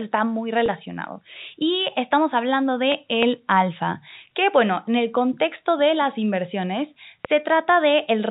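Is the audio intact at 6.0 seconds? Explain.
Yes, the audio is intact at 6.0 seconds, with nothing breaking up the speech beyond the narrow telephone band of its G.711 coding.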